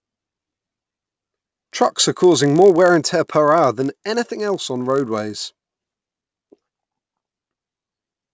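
From start to finish the speech carries a resampler restarted on every block: each 20 ms block was converted from 48 kHz to 16 kHz in isolation, so its edges err, giving a 50 Hz buzz under speech, seen as evenly spaced vertical lines on a spectrogram.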